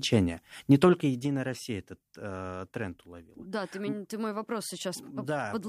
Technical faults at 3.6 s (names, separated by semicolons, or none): none